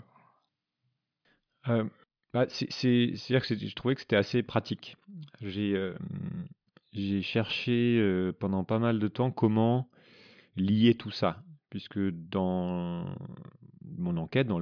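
Speech recording, with no audible technical faults anywhere.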